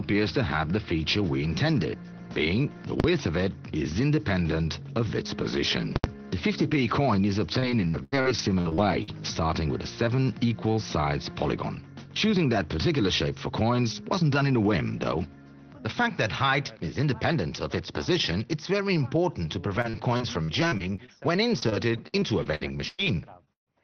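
At 3.0 s and again from 5.96 to 6.04 s, the signal jumps to invalid numbers at full scale: a calculation produced infinite or invalid values that were forced to one extreme and held flat for 40 ms and then 80 ms. The first is short enough to sound like a single bang. The second sounds more like a loud pop at each edge with nothing between. Unlike clipping, no sound survives underneath.

From 7.59 to 9.09 s, and then across 19.75 to 23.68 s, repeated packet loss gives a choppy, robotic texture. Each hole is patched by extending the last sound, and another hole soon follows. The gaps reach 83 ms and 136 ms, with about 0.3 s and 0.5 s rebuilt in the two stretches. Unlike a plain dropout, the holes are filled with smeared repeats rather than silence. Throughout, the audio is limited to about 6 kHz, which fits the Opus call path.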